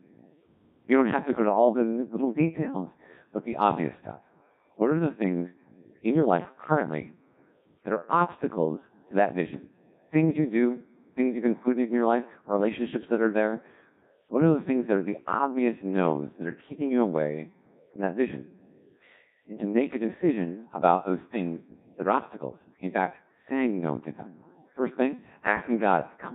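From start to end, the speech has passed through a Codec 2 vocoder at a very low rate, which fits a setting near 1.6 kbit/s. Instead of carrying the waveform, the codec keeps only pitch, voicing, energy and a coarse spectral envelope, and the decoder rebuilds the voice from sine waves. The damage is heavy: the voice comes out robotic and buzzy, with a synthetic, smeared quality across the whole recording.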